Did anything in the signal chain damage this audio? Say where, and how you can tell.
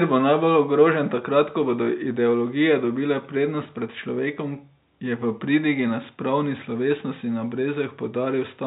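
No, the chain shows no damage: the speech carries the expected G.711 telephone coding, with its band ending at about 3.8 kHz.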